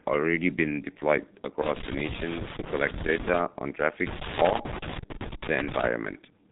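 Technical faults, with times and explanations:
Throughout: G.723.1 codec. The speech is muffled and hoarse. Nothing gets through above about 3.8 kHz, so the top end is simply gone, and consonants smear into each other. The damage is heavy, which fits the 6.3 kbit/s mode of this old internet-telephony codec. It works in long 30 ms frames and updates its model of the voice slowly, so quick changes in the speech get averaged into a rough, buzzy blur.
1.62–3.40 s and 4.07–5.87 s: loose connector crackle. There are two irregular bursts of scratchy crackle, each almost 2 seconds long. It sounds like a worn or dirty contact being jiggled. As it makes and breaks in quick succession, the signal gets chopped into tiny fragments, and any DC sitting on the line turns each break into a pop. Together these give that ragged, scratchy texture rather than a steady noise.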